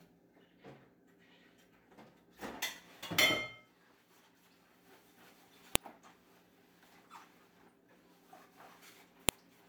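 At 5.76 s and 9.29 s, a file header played as audio: leftover header bytes at each joined piece snap loudly, showing as a lone vertical spike and full-band spectrogram line.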